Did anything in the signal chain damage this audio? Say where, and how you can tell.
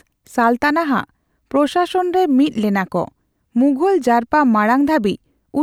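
No, nothing along the chain left a mark I can hear; this one's fine as it stands.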